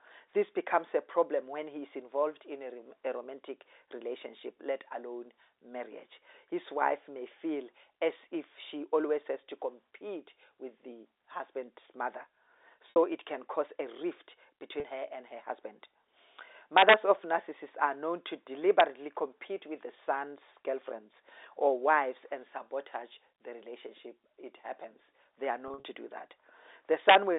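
Packet loss with pitch repetition at 12.9 s (60 ms) and 14.8 s (40 ms): the last pitch period is looped across each gap, giving a brief buzzy hold. Integer overflow at 16.78–16.94 s and 18.8 s: peaks about 1 to 2 dB over the limit wrap to the opposite sign, producing harsh cracks. More packet loss at 25.68–25.84 s scatters 100 ms of gaps, the longest 40 ms, into a stuttering buzz. A final overflow crack follows at 27.09–27.16 s.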